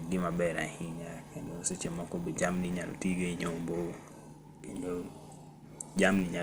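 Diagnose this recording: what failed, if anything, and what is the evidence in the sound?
Throughout the speech there is plainly audible codec damage: the top end is dull, and the remaining sound has a gurgling, granular texture. This is likely MPEG Layer II (MP2) compression at a low rate, consistent with about 80 kbps. Short of bits, the encoder switches off upper sub-bands and quantises the rest coarsely. On a spectrogram there is a hard ceiling, with patchy, flickering energy just beneath it.

A steady 100 Hz buzz also runs through the whole clip and rises and falls with the speech level. This is a filter restarted on every block, a processing or buffer-stage fault. The filter discards its state at each block boundary and starts from silence, so every 10 ms block opens with a small transient. The waveform shows regularly spaced glitches every 10 ms, and the spectrogram shows vertical striations with a comb of harmonics at multiples of 100 Hz.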